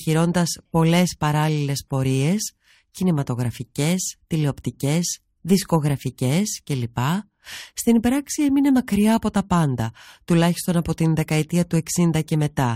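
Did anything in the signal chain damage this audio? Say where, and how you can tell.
No, nothing in the signal chain damaged this audio.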